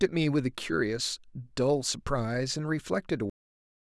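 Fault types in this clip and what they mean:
Cut-off end: the speech stops mid-sound at 3.30 s and drops straight into digital silence, with no decay or fade as a natural ending or fade-out would have.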